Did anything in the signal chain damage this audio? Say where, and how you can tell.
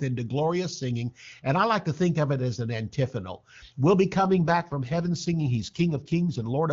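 Yes: an AMR rate drop on the network link, 4.16 to 6.61 s. Speech turns rough and synthetic with no gap or narrowing, which fits a forced fall to a rate near 8.85 kbit/s.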